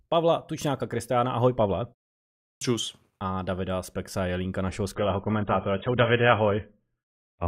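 At 2.55 s, after a pause of about 0.69 s, the speech resumes with a clipped start after a pause. The output device had gone idle during the silence and was still waking when the sound returned, so roughly 64 ms of the onset, up to 2.61 s, never reached the output. The first sounds are missing, and the speech snaps in abruptly. On a waveform the envelope jumps from flat silence to full amplitude with no rising attack. A spectrogram shows the energy beginning with a hard vertical edge.

From 4.95 s to the end of the clip, the adaptive stream at a lower bitrate takes over. The connection slowed and the player switched to a leaner encoding, which fits a step down from about 96 kbit/s AAC to roughly 20 kbit/s. Nothing is heard above 3.8 kHz, so the speech turns dull and muffled, with a watery, smeared texture. The switch is sudden and gapless. A spectrogram shows a flat ceiling at 3.8 kHz from 4.95 s onward, with blotchy, patchy energy below it.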